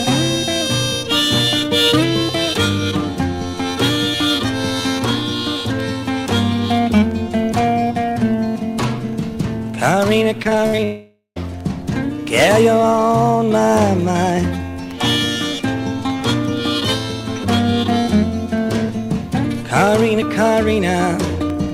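From 10.43 to 10.80 s, the link repeatedly lost or delayed packets: four gaps, the longest 59 ms, with about 29% of that span concealed by extending the preceding sound. This repeated packet loss gives a choppy, robotic texture with pieces missing.

Immediately after, from 10.84 to 11.38 s, the sound suggests a likely long network dropout, with about half a second missing. Concealment first stretches the last sound into a fading buzz or hiss, then about 110 ms of silence follows before the audio resumes, the lost portion never recovered.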